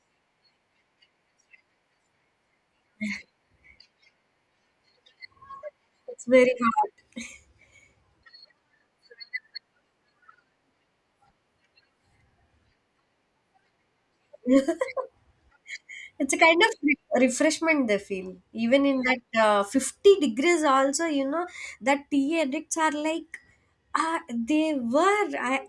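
No technical faults can be heard anywhere in this speech.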